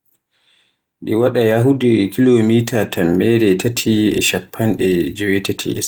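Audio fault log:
The signal shows only light Opus voice compression that keeps the full audio band, which fits the hybrid mode at around 24 kbps.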